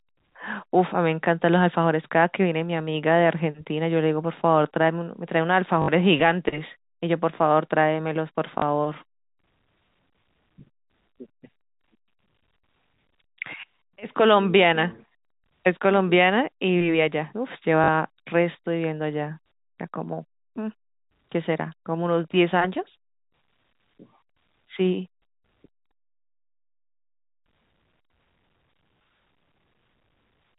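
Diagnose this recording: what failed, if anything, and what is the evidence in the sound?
Packet loss with last packet repeated, a network fault, at 5.82–5.88, 8.58–8.62 and 17.84–17.88 s. The receiver replayed stale audio, making short robotic stutters that fit 20 ms packets.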